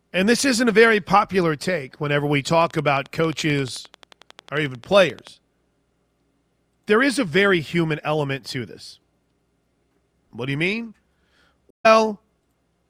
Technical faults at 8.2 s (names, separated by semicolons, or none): none